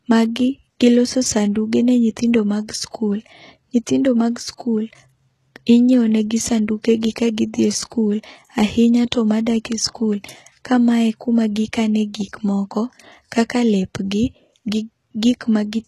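HE-AAC compression, throughout: the speech carries plainly audible codec damage, and nothing remains above 12.3 kHz. The likely cause is band replication, where upper frequencies are rebuilt from copied lower bands, so sibilants sound gritty and metallic, which fits a bitrate near 16 kbps.

Pre-echo, 4.57 to 4.60 s: quantisation noise spread across a transform block reaches back about 21 ms before a sharp onset, so a brief hiss arrives ahead of the attack and the attack itself sounds softened and smeared.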